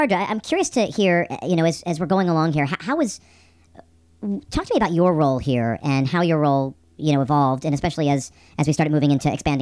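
Throughout the speech runs about 1.38 times too fast and roughly 5.6 semitones high, which fits 16 kHz audio played back at 22 kHz: a wrong sample rate. Unlike a pitch shift or time-stretch, tempo and pitch rise together in lockstep, giving a hurried, chipmunk-like sound.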